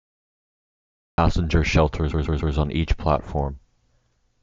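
The recording began late, so from 0 to 1.18 s there is only digital silence, and the speech then starts abruptly in the middle of a sound at 1.18 s, with no natural attack or fade. This is a classic cut-off start.

From 2.10 to 2.53 s, a block of compressed frames was sent more than once. A 144 ms stretch plays three extra times, stuttering audibly and adding 432 ms before "on each". These repeated frames fit roughly six frames in all.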